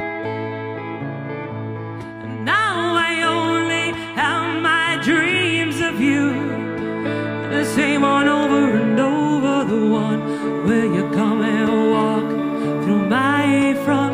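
From 0.43 to 13.43 s, periodic USB or driver dropouts: once a second, a tiny sliver of audio gets skipped, leaving a regular tick whenever sound is present.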